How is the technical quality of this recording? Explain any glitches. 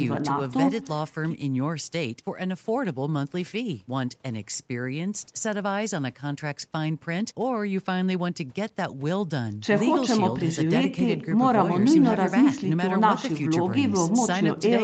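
No glitches or faults can be heard in this speech.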